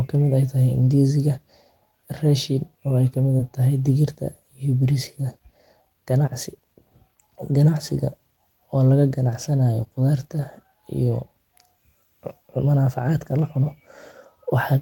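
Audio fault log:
3.37–3.41 s, short concealed packet loss: about 20 ms of the call arrived too late for the decoder, so the receiver improvised roughly 15 ms of fill by extending the preceding sound before blending back into real audio, heard as a brief smear or wobble.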